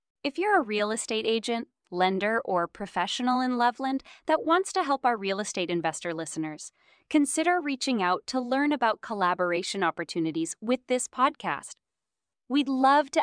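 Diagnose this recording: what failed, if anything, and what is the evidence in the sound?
No fault can be heard.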